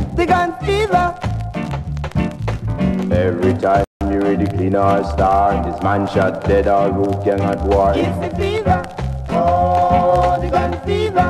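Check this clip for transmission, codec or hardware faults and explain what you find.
One fault is audible, a single playback stall. From 3.84 to 4.01 s the sound cuts out mid-flow for about 167 ms, then resumes. The player likely ran short of buffered data or its thread was briefly blocked. On a waveform this appears as a flat gap; a spectrogram shows an empty vertical band across all frequencies.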